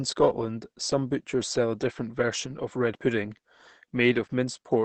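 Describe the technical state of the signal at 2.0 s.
At 2.0 s the speech carries the Opus compression damage present throughout the clip. Nothing sounds above 8.4 kHz, and the sound is muffled and hoarse, likely from the speech-oriented SILK mode, which fits a low bitrate near 16 kbps.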